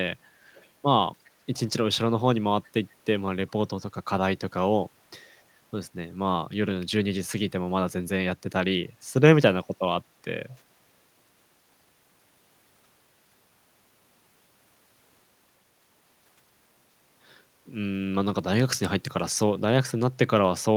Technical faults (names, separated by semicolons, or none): echo leak